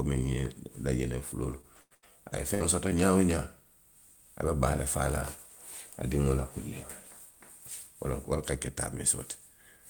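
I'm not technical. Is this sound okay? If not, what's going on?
No, not quite. From 1.51 to 2.62 s there's repeated packet loss (robotic sound): four brief dropouts get patched over, so the speech turns choppy with pieces missing.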